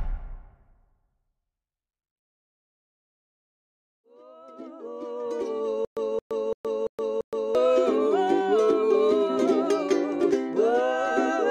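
From 5.85 to 7.55 s the playback likely stalled repeatedly, and on each retry it replayed the last fragment it still held before running dry. The result is a stutter with silent gaps: a 221 ms burst of sound repeats five times at a steady pace of one every 340 ms, each followed by about 119 ms of dead digital silence. The audio that belonged in that stretch never plays.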